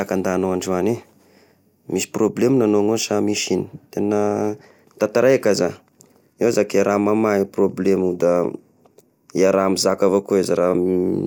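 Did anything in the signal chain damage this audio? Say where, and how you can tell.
No, nothing in the signal chain has audibly damaged this speech recording. No stage from capture through to playback leaves a mark that a careful listener can pick out at any point.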